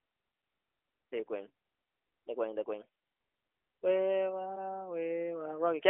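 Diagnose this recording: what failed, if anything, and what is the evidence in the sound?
Nothing has failed: the speech comes through an AMR narrowband mobile codec path, with the light coding texture expected of a rate that fits the 12.2 kbps mode, a 300 Hz to 3.4 kHz telephone band, and nothing above 3.5 kHz.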